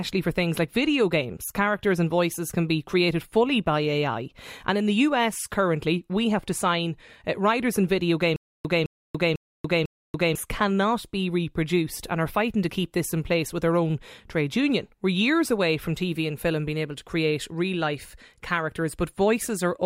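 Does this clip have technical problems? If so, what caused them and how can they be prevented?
Yes. From 8.36 to 10.35 s, after "uh writers and video", a stutter with silent gaps occurs. A 211 ms burst repeats four times, with about 287 ms of digital silence between, roughly every half second. The stream likely stalled and replayed its last fragment. Audio resumes at "cannot be reproduced and". Larger playback buffering would prevent it.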